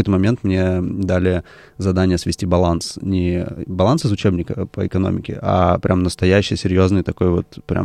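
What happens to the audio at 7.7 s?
Nothing goes wrong at 7.7 s: the speech carries on intact through that moment, with no dropout, click or distortion.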